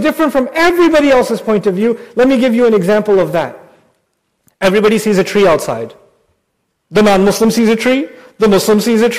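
Hard clipping runs right through the speech, start to finish. The signal's being pushed about 16 dB past what some stage in the chain can hold, so the peaks get sliced flat, and with that much overdrive it's hitting the ceiling a lot, something like a tenth of the samples. Those squared-off tops throw harmonics way up the spectrum, which is why every louder syllable comes out wrapped in a harsh, gritty fuzz rather than just the odd crackle.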